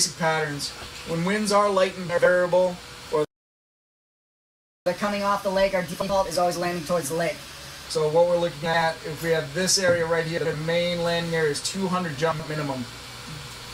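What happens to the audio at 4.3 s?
At 4.3 s the audio is in the middle of a playback stall. Everything cuts to silence at 3.25 s and stays dead for about 1.6 s, until 4.86 s, when the sound picks up again. That hole sits right in the flow, so it's hard to miss. The likely cause is the player starving for data or having its thread blocked, so nothing reached the output until it caught up and resumed.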